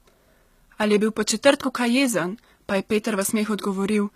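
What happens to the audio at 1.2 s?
At 1.2 s the speech carries the same damage heard across the whole clip, likely HE-AAC compression. Only the lower spectrum is coded directly, and the treble is rebuilt by copying lower bands upward under a coarse envelope, so s sounds come out gritty and metallic. Nothing sits above about 14.9 kHz, and the plainly audible damage fits a low bitrate near 20 kbps.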